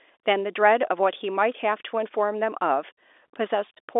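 No faults audible; the speech sits in a normal G.711 telephone band of 300 Hz to 3.6 kHz, with nothing above 3.8 kHz.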